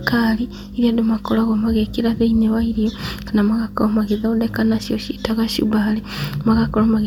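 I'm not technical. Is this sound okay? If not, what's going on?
Yes, this one's fine: nothing in the speech jumps out as a technical problem, so there's nothing here to worry about.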